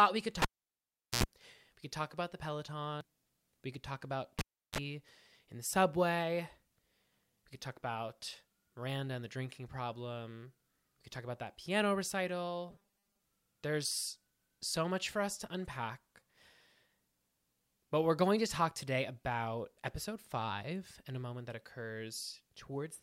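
The speech is broken by a cable pulled and plugged in twice. After "we could" at 0.42 s a pop drops the signal for about 0.77 s, and an 82 ms burst of 60 Hz mains buzz comes before the second pop at 1.24 s. After "could talk about" at 4.39 s the gap lasts 0.35 s, with 30 ms of 50 Hz buzz before the sound returns at 4.78 s. A spectrogram shows vertical pop lines around near-empty stretches, with harmonic stripes at the mains frequency just before each return. At 3.01 s a CD skip mutes the sound for a few milliseconds, so the playback resumes from a different point on the disc. A waveform shows a tiny notch and a click with a discontinuity across it. From 12.70 to 13.22 s the sound turns rigid and metallic, locked to a 200 Hz buzz, with roughly half the material replaced by repeats. This is likely robotic sound from repeated short buffers, about 5 ms long. A spectrogram shows evenly spaced harmonics of 200 Hz that stay fixed across that stretch.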